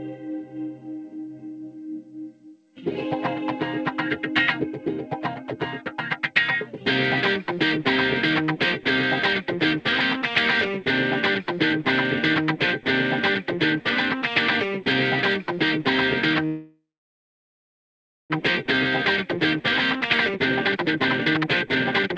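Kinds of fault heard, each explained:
Call audio freeze: From 16.46 to 18.32 s the sound stops moving forward. The last bit gets stretched into a buzzy tail that fades, then roughly 1.47 s of near silence, which is likely packets stalling and the jitter buffer running dry. When things resume at 18.32 s it carries on right where it left off, so nothing is lost, but the whole stream now sits about 1.84 s later than before.
Jitter buffer speed-up: From 19.26 s to the end at 22.18 s the sound rushes along at about 143% speed while the pitch stays put. That's the receiver working off the backlog the freeze left, snipping out tiny pitch-period chunks over and over to trim the extra delay. Over those three seconds it throws away about one and a half seconds of audio, so the ending feels hurried and compressed in time.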